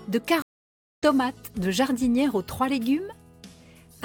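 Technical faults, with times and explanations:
0.42–1.03 s, stream reconnect: the sound stops dead for about 0.56 s, then returns at a point roughly half a second further on, so material has been skipped rather than merely paused. The connection dropped, the player fell silent, then reconnected and started a fresh decoder mid-stream at the live position. That forward jump sets it apart from a plain dropout or buffer underrun, where playback picks up exactly where it stopped.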